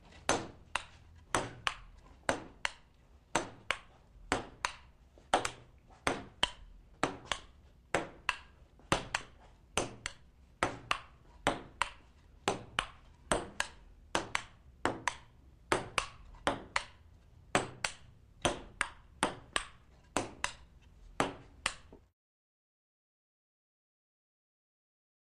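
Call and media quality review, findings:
Nothing stood out on listening that would warrant a finding against the capture or transport path.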